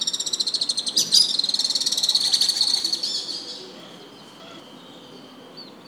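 A recording of sounds jumps and garbles briefly at 2.2 to 2.8 s and again at 3.8 to 4.6 s. These are chunks out of order: a 200 ms block plays two, then three, blocks late, leaving three hard joins each time.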